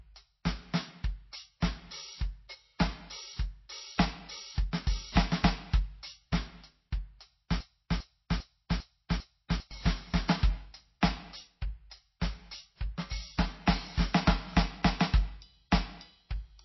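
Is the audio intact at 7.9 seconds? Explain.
No. From 7.60 to 9.71 s there's a broken-record loop: a 0.4 s piece repeats back to back, five times, so the music meant for that stretch never plays. It's likely a stalled player or stream that kept resending its last buffered fragment.

On top of that, there's plainly audible MP3 compression, likely from squeezing the music into something like 24 kbps. Weak frequency lines blink on and off, giving a watery, swirly texture, and there's nothing above 5.8 kHz, so the treble is gone.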